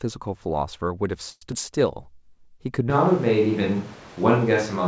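A call audio freeze runs from 1.30 to 1.43 s. The sound stalls into a fading buzz or hiss that ends in a brief silence, then resumes where it left off, likely because packets were held up and the jitter buffer ran dry, inserting about 115 ms. A skip ahead follows at 1.51 to 1.54 s: roughly 70 ms of audio is dropped and the two sides are butted together almost directly, a small jump forward. A jitter buffer slow-down spans 1.95 to 2.19 s, where repeated pitch periods add 44 ms and stretch the sound to 85% speed at unchanged pitch. From 2.90 s to the end, a switch to a distant microphone makes the sound suddenly roomy and hollow, with thinner bass and room noise about 25 dB below the speech, at much the same level. The likely cause is the close microphone dropping out. Throughout, nothing is heard above 8 kHz, which fits a G.722 call codec.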